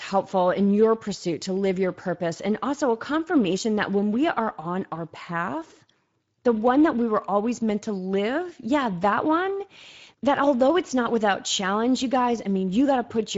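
Throughout the speech, Speex codec damage is plainly audible: a hoarse, noisy CELP texture from too few excitation bits, which fits roughly 16.8 kbps, with nothing above 7.7 kHz.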